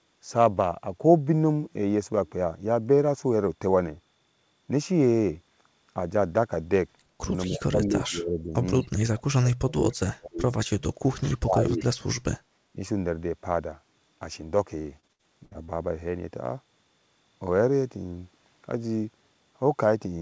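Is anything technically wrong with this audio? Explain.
Yes. There are three kinds of fault.

Speech suppressed in double talk occurs five times: 7.48 to 8.53 s, 8.83 to 8.91 s, 9.14 to 10.43 s, 11.14 to 11.82 s, and 12.73 to 12.79 s. The speech dips sharply or cuts out in pieces. The deepest drop is around 40 dB, near 9.1 to 10.4 s. The last dip is slight. The likely cause is an echo canceller facing both sides talking at once. It could not tell local speech from loudspeaker echo, so it pulled everything down.

An echo leak appears twice, at 8.83 to 8.88 s and 11.33 to 11.38 s. Each is a brief scrap of delayed sound, 245 ms behind the original. The first is very faint. The second is louder, roughly 20 dB under the speech. Both likely come from a far end using a loudspeaker. Its echo canceller missed part of what its microphone picked up, and that residue was sent back.

Repeated packet loss, with robotic sound, runs from 14.82 to 15.70 s. 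Seven short holes fall in under a second. The longest is 62 ms. About a quarter of that stretch is patched-in sound. Each missing piece is filled by stretching the previous sound, and the next hole comes soon after. The result is choppy, with fragments missing. The audio's bandwidth stops near 8 kHz, which fits a wideband call codec such as G.722.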